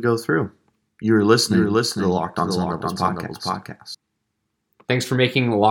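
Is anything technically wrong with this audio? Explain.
Yes. From 1.47 s to 3.95 s there is a doubled audio track: a full-band second copy of the speech trails about half a second behind, roughly 5 dB quieter, dry and without room decay, starting and stopping abruptly. The likely cause is a slower second capture path.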